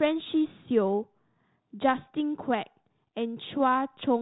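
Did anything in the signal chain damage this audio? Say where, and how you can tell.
No, the speech has passed through G.726 ADPCM coding at 32 kbit/s, the standard rate for DECT cordless phones, and that stage shows only as the expected lack of content above 4 kHz and a light graininess that follows the speech level, with no sign of damage from anywhere else in the chain.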